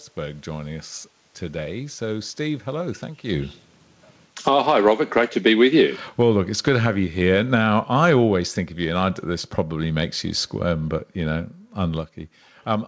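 Automatic gain falling runs from 4.32 s to 12.08 s. The gain control judged the input too loud or its background noise too strong and pulled its gain down steadily, by about 15 dB over those eight seconds. The speech starts strong and then sinks, and the room noise beneath it sinks by the same amount. That shared drop separates it from the talker's own shift in distance around 3 s. The band limit at 8 kHz, with nothing above it, typical of a G.722 call path, stays constant throughout.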